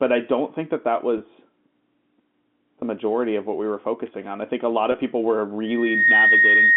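Around 1.18 to 1.20 s, again at 2.81 s, and at 4.92 to 4.94 s the speech briefly catches, like a held, slightly buzzy syllable. That's packet loss with pitch repetition: roughly 20 ms of audio went missing each time, which fits a single lost packet, and the receiver filled the hole by replaying the last pitch period and fading it. The gaps are short enough that the patch never drops to silence.

From 5.64 s to the end there's loudspeaker feedback squeal. A microphone is hearing its own loudspeaker, and at 1.9 kHz the loop gain tipped over one, so that tone feeds on itself. It swells up over about 0.4 s and ends up sitting around 10 dB above the speech, a steady whistle that keeps going until the clip stops. The G.711 A-law telephone line carrying all this sounds like an ordinary 200 Hz to 3.5 kHz phone band.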